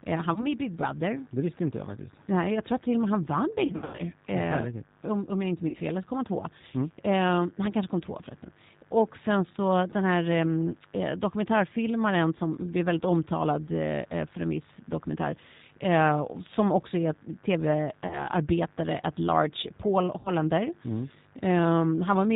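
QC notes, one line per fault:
Throughout: G.729 codec. The speech is plainly rough and synthetic, with nothing above 4 kHz. It is rebuilt from a vocal tract filter, a pitch predictor and a few pulses per 10 ms frame, which fits an 8 kbit/s G.729A stream.
0.34–0.47, 3.66–4.02, 5.68–5.77, 18.07–18.25, 20.19–20.30 s: VoIP packet loss concealed by the speech codec. Sound smears into a decaying buzzy tone or coloured noise, then stays weak or distorted briefly. The decoder extrapolated lost frames: 20 ms, 220 ms scattered after "och med han vann" (longest run 100 ms), 60 ms between "om jag inte" and "fel eller så kom", then 40 and 60 ms.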